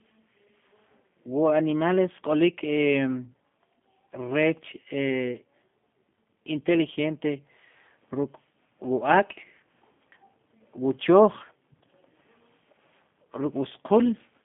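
Throughout, G.729 codec damage is plainly audible. The speech sounds rough and synthetic, squeezed into 150 Hz to 3.5 kHz. This fits an 8 kbit/s model-based VoIP coder.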